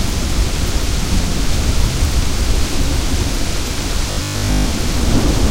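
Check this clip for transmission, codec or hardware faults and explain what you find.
One fault is present: a stretch of robotic sound from repeated short buffers between 4.11 and 4.65 s. Over that half second the sound takes on a rigid, metallic 50 Hz buzz that still loosely tracks the underlying audio. The likely cause is audio arriving too seldom, so the playback side fills the gaps by looping the last fragment, here about 20 ms long, which sets the 50 Hz pitch. Most of the real audio in that span is skipped.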